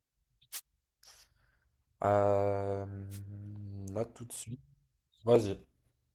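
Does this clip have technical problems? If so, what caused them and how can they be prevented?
Yes. There are two wireless microphone noise hits in this speech, a short burst of static from about 0.52 to 0.61 s and another from 3.10 to 3.20 s, each roughly a tenth of a second. They come from the analogue FM radio link fading for a moment as reflected signals cancel the direct one. Receiver noise jumps up briefly before the signal recovers. To prevent this, use diversity receivers with antennas in clear line of sight, keep the transmitter close, and pick a clean frequency.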